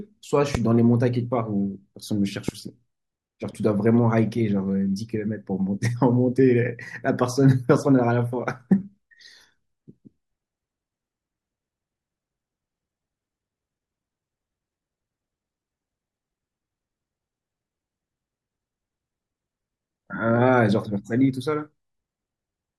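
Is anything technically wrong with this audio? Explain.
Yes, two loud pops, at 0.55 to 0.57 s and 2.49 to 2.51 s, sharp clicks well above the speech, likely from an electrical glitch or switching transient.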